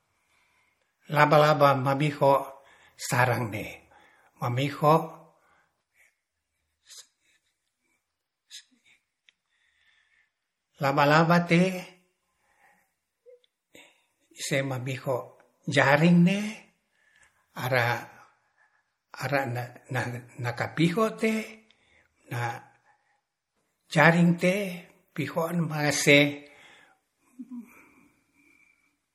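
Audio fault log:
throughout, low-bitrate audio saved at a high bitrate: the speech has a dull, smeared top with nothing above 16.5 kHz, likely from an earlier MP3 encode near 48 kbit/s that the higher-rate re-encode cannot restore.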